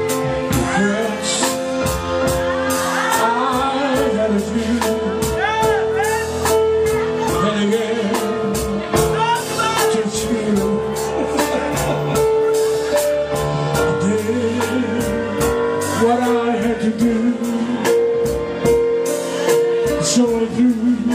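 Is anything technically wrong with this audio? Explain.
No, nothing is technically wrong with this audio.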